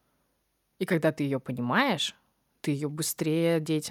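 Nothing stood out on listening to this speech recording.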